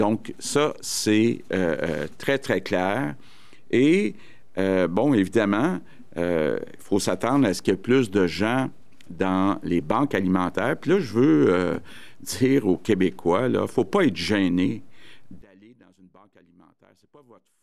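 At 15.42 s an audio dropout to a faint residue begins and runs to the end, leaving only a weak leak about 30 dB down, likely a signal interruption.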